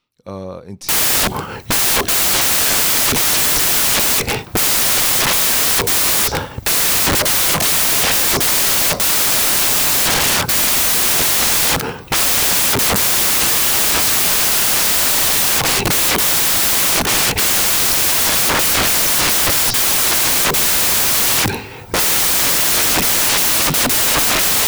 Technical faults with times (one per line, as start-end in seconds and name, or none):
0.89-24.67 samples built from the wrong bytes